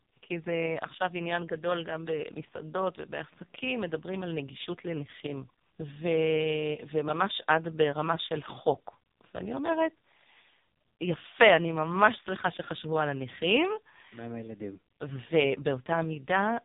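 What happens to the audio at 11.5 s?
At 11.5 s the speech carries the same AMR narrowband mobile codec damage heard across the whole clip. The codec resamples to 8 kHz and rebuilds the voice from a vocal-tract filter excited by sparse pulses in short subframes, so nothing above 3.8 kHz survives. The heavy buzzy, synthetic quality at this moment fits the codec's lowest mode, around 4.75 kbps, where too few pulses are left to carry natural detail.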